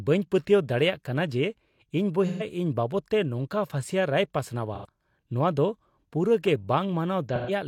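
Three short dropouts of AAC frame loss with concealment occur, at 2.27–2.43 s, 4.74–4.86 s and 7.35–7.51 s. Each time the decoder loses coded frames and patches the gap by reusing the last good spectrum, so the speech turns briefly smeared and noisy-phasey. The gaps last about 128 ms, 85 ms and 128 ms, which fits two or three lost frames. On a spectrogram each shows as a blurred block where harmonic striations dissolve. The waveform envelope flattens into a hazy smudge.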